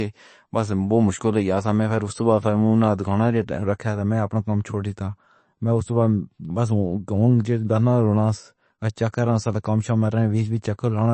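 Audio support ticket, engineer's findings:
Speech dull and watery throughout; nothing audible above 8.3 kHz. Weak high-frequency detail swirls in and out, s sounds chirp metallically, consonant attacks smeared.

Likely MP3 compression, damage fitting a bitrate near 34 kbps. The starved encoder fixes a treble cutoff and zeroes quiet spectral lines frame by frame.

Distinguisher: a plain low-pass or resample dulls the top cleanly; only the codec adds the swirling and chirps.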